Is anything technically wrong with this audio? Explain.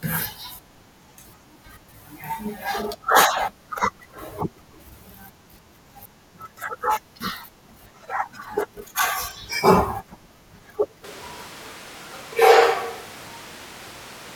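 Yes. At 11.04 s the speech suddenly turns roomy and hollow, with thinner bass and background noise roughly 25 dB below the speech, and it stays that way to the end. Loudness barely changes. It's likely a switch to a distant microphone after the close mic dropped out.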